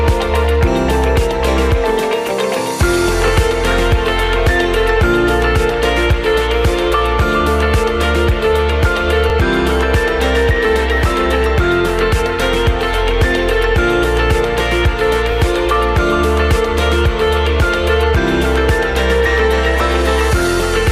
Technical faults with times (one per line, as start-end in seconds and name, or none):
3.28-3.30 overlapping chunks
9.30-9.32 overlapping chunks
15.32-15.34 overlapping chunks